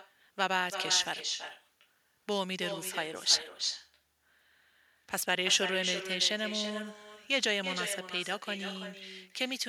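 From start to finish the speech carries echo with no canceller. Someone on the far end is clearly on a loudspeaker, their microphone is catching your own voice, and nothing strips it out, so it comes back after the network round trip, around 300 ms late. The returning copy sits about 7 dB below the direct speech, thinner, trailing every phrase like a quieter shadow.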